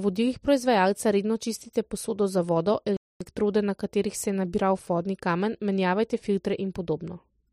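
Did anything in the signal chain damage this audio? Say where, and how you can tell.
Yes, a playback stall: after "čistite posodo za vodo" the speech drops out from 2.97 to 3.21 s, likely the player starving for data, then resumes at "na katerih se je".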